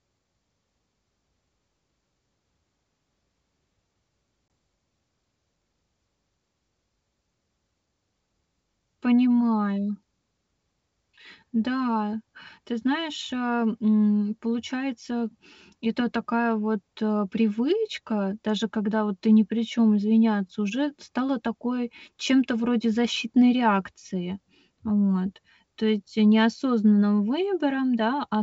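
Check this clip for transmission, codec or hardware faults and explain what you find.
One transmission fault is present. It is packet loss on an ADPCM call, at 4.48 s. About one packet, 20 ms of speech, drops out and is filled with silence, leaving a hard-edged gap. The receiving decoder's predictor and step size lose track of the sender's. Speech then resumes with brief, slight distortion, settling within some tens of milliseconds. The G.722 wideband coding at 64 kbit/s shows faint codec damage at most.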